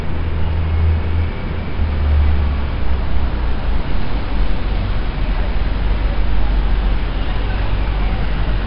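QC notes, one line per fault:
Throughout: 4-bit ADPCM compression. A gritty hiss rides on every loud passage and rises and falls with the level. Sharp attacks smear into distortion. Nothing sounds above 5.3 kHz, so the sound is dull. The heavy damage fits a bitrate near 44 kbps.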